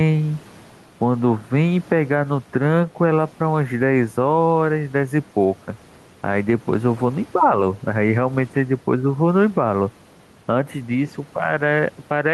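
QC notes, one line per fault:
Throughout, gain pumping: gain swings about 5 dB with loud speech, likely too much input gain hitting a fast limiter.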